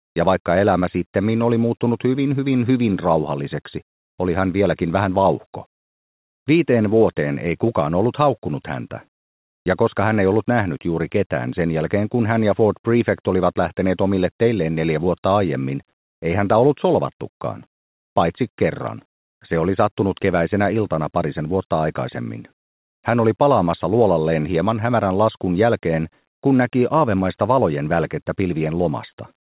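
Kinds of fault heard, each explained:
Comfort noise in place of the background: from 0.0 to 0.16 s and again from 9.18 to 9.66 s, the real background gives way to a flat, featureless hiss about 18 to 19 dB quieter, likely the sender pausing transmission while the receiver fills the gap.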